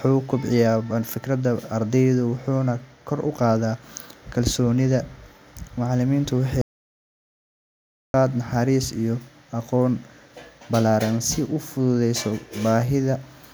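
Speech recording with an audio dropout to silence from 6.61 to 8.14 s, likely a lost input or mute. About 1.53 s vanishes into silence without room tone, unlike a natural pause or gate.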